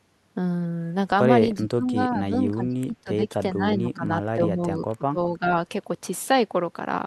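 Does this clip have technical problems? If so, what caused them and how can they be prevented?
Yes. The echo canceller likely failed to separate the talker from loudspeaker echo during double talk, causing speech suppressed in double talk. The speech dips or cuts out in pieces at 1.59–1.95 s (deepest, roughly 35 dB down), 2.11–3.33 s, 3.54–5.19 s (both around 20 dB) and briefly at 5.38–5.45 s. Prevent it with a full-duplex echo canceller that detects double talk and holds adaptation rather than attenuating the near-end signal.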